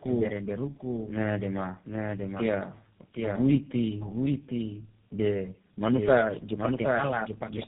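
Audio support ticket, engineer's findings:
Doubled audio track, whole clip: a full-band second copy trailing about 0.7 s behind, a few dB down, dry with no room tail. Likely a second capture path or an edit stacking two out-of-step copies.

Tandem speech coding, throughout: rough, muffled, warbly speech, nothing above 3.7 kHz. Sounds like three low-rate speech codecs back to back, something like iLBC, then G.729A, ending on GSM full rate, each one recoding the previous one's damage.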